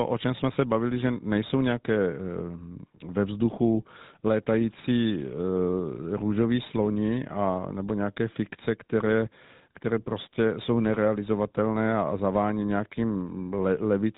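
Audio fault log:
throughout: GSM full-rate codec. The speech passes through a vocal-tract model driven by a regularly spaced pulse excitation, which leaves a buzzy, gravelly roughness that is plainly audible across the whole clip. Only a reduced set of excitation samples is kept, so fine detail between pulses is lost. Nothing above 3.9 kHz survives, giving a narrow, telephone-band sound. The combination fits a 13 kbps full-rate coder.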